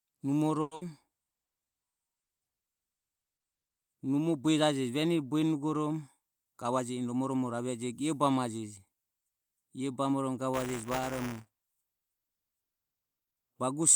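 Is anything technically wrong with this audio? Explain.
Yes, there are four separate faults in this speech clip.

From 0.61 to 0.83 s the sound breaks into a buzzy smear that continues the last moment of speech and fades out. This is a long network dropout. About 120 ms of real audio never arrives, and the receiver fills roughly 200 ms by stretching what it last had. A brief moment, about 10 ms, goes fully silent before speech resumes with that stretch gone. The cause is likely a network outage, and playback comes back with its timing shifted slightly.

From 1.24 to 1.66 s the speech drags. It plays at about 87% of normal speed, yet the pitch stays put, so sounds are drawn out. This is a jitter buffer slow-down. The receiver's reserve of audio had run low or its target delay had just gone up, so it built up a reserve by repeating single pitch periods and bits of pauses over and over. That adds about 62 ms to the passage.

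From 6.45 to 7.54 s the opposite happens, and the speech sounds hurried. It runs at about 109% speed with the pitch unchanged. This is a jitter buffer speed-up. The buffer was holding more audio than it aims for, so the receiver trimmed many small pieces of one or a few pitch periods, about a tenth of a second in total, to bring the delay back down.

From 10.54 to 12.04 s a robotic buzz at 200 Hz rides on the speech and is present only while there is sound. This is buffer tearing. The program writing the ring buffer and the hardware reading it have slipped so that they cross inside every period. A small slice of each period, around 5%, plays audio from about 10 ms earlier, with hard joins on both sides. The 200 Hz rate points to a buffer period of about 5 ms.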